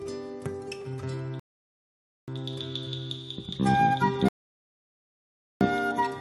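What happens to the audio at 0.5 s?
Nothing goes wrong at 0.5 s; the audio plays through that moment intact, with no dropout, click or distortion.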